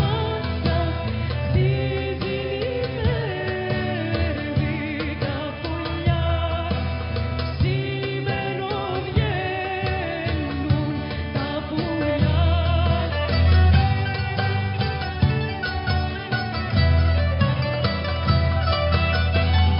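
The signal holds steady throughout, with no dropouts, distortion, or other technical disturbances to be heard at any point.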